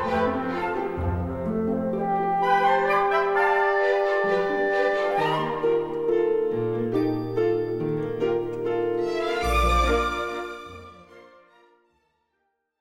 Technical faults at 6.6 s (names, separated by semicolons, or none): none